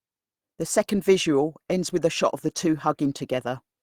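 Throughout the clip there is clock drift between sender and receiver: the sending device's clock runs roughly 2% slow relative to the receiver's. Audio therefore arrives slightly too slowly to keep the receiver's buffer full, and the buffer keeps draining toward empty. Unlike a steady resampling error, this does not shift the pitch of the speech. The mismatch shows up only as small timing irregularities spread across the clip, not as a single dropout or a change in tone.

From 0.56 s to 3.5 s the receiver makes repeated timing corrections, stretching the speech to about 98% speed by repeating short slivers of audio. Together these add roughly 70 ms. The corrections all run in the same direction, lengthening rather than cutting, and are spaced unevenly. Ordinary network jitter would instead cause scattered gaps or clicks that go both ways.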